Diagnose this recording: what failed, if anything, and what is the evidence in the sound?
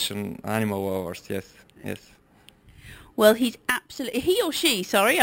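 The sample-rate conversion stage failed. The audio was raised to a higher rate by holding each sample with no smoothing filter, which fits material at 12 kHz converted to 44.1 kHz. This is imaging from sample-and-hold upsampling. Throughout the clip, mirror copies of the spectrum sit above the real content, the lowest filling 6 to 12 kHz at about 14 dB below the signal. They are heard as a bright metallic fizz that rises and falls with the sound.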